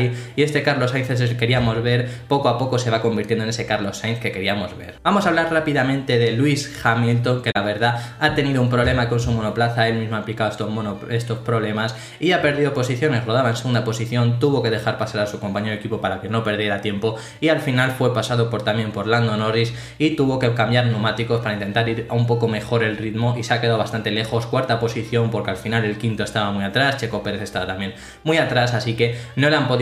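At 7.51 to 7.57 s there is a brief corrupt frame concealed, where the decoder hid about two damaged AAC frames' worth of audio.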